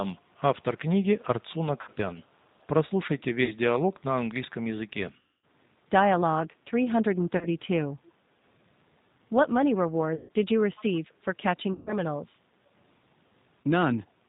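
Throughout, the speech carries plainly audible G.729 codec damage. The codec sounds like 8 kbit/s G.729A rebuilding the speech from a vocal tract filter, a pitch predictor and sparse pulses, which leaves it rough and slightly synthetic. A spectrogram shows a hard ceiling at 4 kHz and grainy, smeared harmonics.

VoIP packet loss concealed by the speech codec then occurs at 1.81–1.91 s, 3.44–3.53 s, 5.19–5.44 s, 7.37–7.48 s, 10.15–10.31 s, 11.73–11.96 s and 13.60–13.64 s. Each gap matches 40 to 240 ms of lost audio, the longest near 5.2 s. The decoder extends the last pitch and filter while lowering the gain, so each gap is stretched into a sound that fades and recovers weakly. A spectrogram shows frozen, repeated harmonics, and the waveform shows the amplitude tapering.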